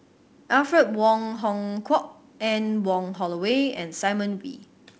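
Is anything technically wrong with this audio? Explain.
No, nothing stood out as technically wrong when listening to this speech clip.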